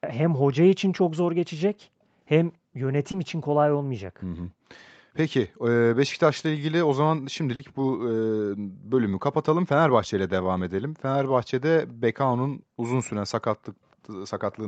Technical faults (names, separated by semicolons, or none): background gated by the echo canceller; short concealed packet loss